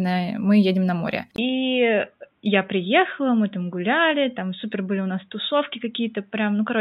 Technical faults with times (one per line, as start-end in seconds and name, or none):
1.36-6.80 input switched to a poorer device